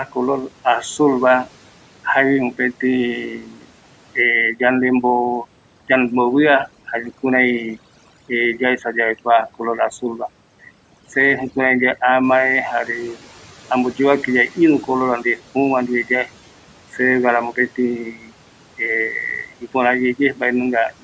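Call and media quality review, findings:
Speech cut by the noise suppressor at 0.05–2.59 s, 3.42–3.71 s, 13.20–14.88 s, 16.05–16.99 s, 17.53–18.79 s and 19.47 s to the end. Soft consonants and word endings sound swallowed, dipping by up to about 12 dB (about 8 dB at 13.20 s), a few hundred ms of speech per stretch. The suppressor is misclassifying low-level speech as room noise and attenuating it along with the background, which sits well below the speech.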